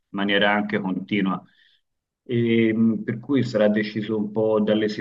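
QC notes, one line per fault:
0.95–1.00 s, repeated frames: a brief stutter where 46.4 ms of the speech plays a second time immediately after itself. A run of compressed frames was decoded twice, which fits two frames of about 23 ms each, lengthening the clip by 46.4 ms.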